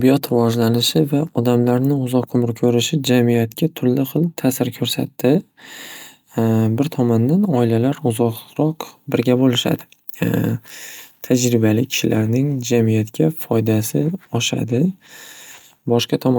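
No technical faults are audible.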